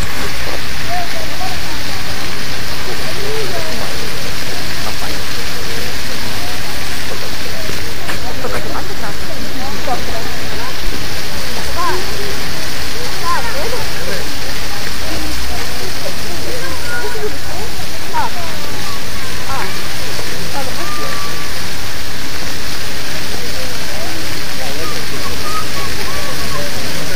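Hard clipping runs through the whole recording: the signal was driven about 4 dB past what a stage in the chain could pass, so the highest peaks were sliced off flat. Only a small fraction of samples, well under one percent, exceed the limit. The result is brief crackle on the loudest moments rather than constant fuzz. Each squared-off peak sprays harmonics high into the spectrum, which gives those moments their gritty edge.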